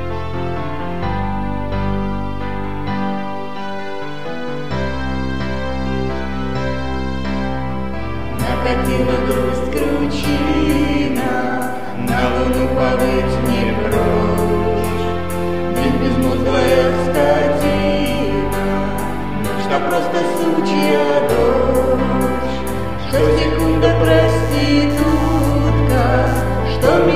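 From 24.28 to 26.88 s the audio carries computer activity noise, a chirping buzz pulsing around 100 Hz, roughly 25 dB below the signal. It follows processor or graphics load on the shared ground rather than the sound, unlike steady mains hum.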